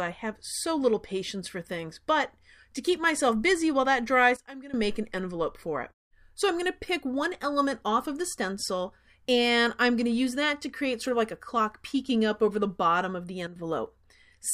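At 4.37 s the level drops abruptly by about 15 dB and snaps back at 4.74 s. At 13.47 s a second, shorter dip of about 10 dB lasts until 13.56 s. Both are sudden gain jumps. The sound and its background noise fall and recover together with no fade, which points to a digital gain change applied between adjacent samples, likely a setting or bit shift switched without a ramp.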